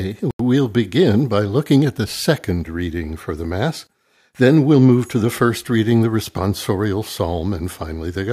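A Bluetooth stall hits early in the speech, from 0.31 to 0.40 s, where the sound drops to silence for 87 ms and then carries on. The likely cause is radio interference holding back wireless packets long enough for the headphones' small playback buffer to empty, so output halted until resent packets arrived. It sounds like a brief, clean gap punched into the audio rather than a crackle or a fade.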